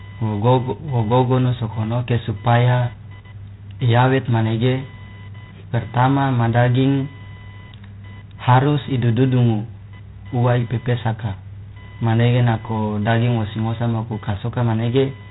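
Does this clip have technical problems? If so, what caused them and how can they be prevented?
Yes, two problems, and both run through the whole clip. The first is computer activity noise: a buzzy, chirping whine pulsing at something like 1 kHz, sitting roughly 30 dB under the speech. It rises and falls with whatever the computer is doing, not with the talker. That happens when processor, graphics or mouse load shifts the ground the audio circuit shares, so the computer's activity leaks straight into the signal. To prevent it, record through an external or USB-isolated interface, or use a ground-loop isolator so the audio doesn't share the computer's noisy ground.

The second is G.726 ADPCM coding. This codec sends only a few bits per sample, each one describing how far the audio strays from an adaptive prediction. Here the coarse steps show up as a harsh, rasping hiss that rides along with the speech level and gets louder as the speech does. 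The damage is plainly audible, and the grit suggests 24 kbit/s rather than the 32 kbit/s DECT default. Nothing gets through above 3.8 kHz, so the top end sounds cut off. To prevent it, capture at the source or over a wideband link instead of through a low-rate ADPCM telephone path.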